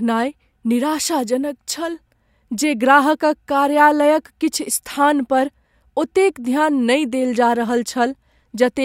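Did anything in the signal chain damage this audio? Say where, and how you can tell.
No, nothing in the signal chain damaged this speech recording. Listening through it, no stage from capture to playback leaves an audible mark.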